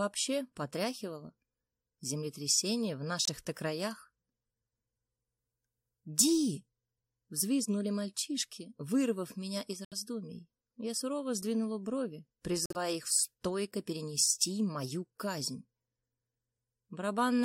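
At 3.25 s, 9.85 s and 12.66 s the sound drops abruptly into silence for about 44, 88 and 107 ms: corrupt frame muted, where the decoder rejected damaged compressed frames and the player substituted silence. Unlike a dropped packet with skipping, timing is preserved and nothing jumps ahead.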